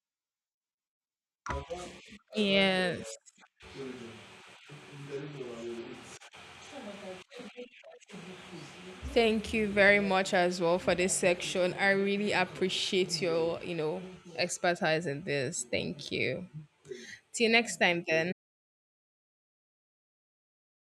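At 18.33 s the input feeding the recorder was most likely cut off, through a disconnected device, a broken link or an accidental mute, while the recording carried on writing silence. The result is an audio dropout to silence: the speech stops abruptly mid-flow and is replaced by complete silence, with no room tone or background noise left, running to the very end of the clip. Whatever was said after that point is lost.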